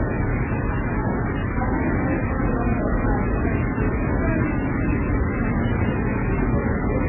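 From start to finish the sound is confined below about 3 kHz, with a dull, band-limited top end and layered smearing and warbling that do not match a single coding stage. This points to transcoding between lossy codecs, likely a very low-rate MP3-like encode passed through Opus and then WMA. Each later stage re-encoded the earlier artefacts and added its own, while the narrowest bandwidth, set by the first encode, carried through to the end.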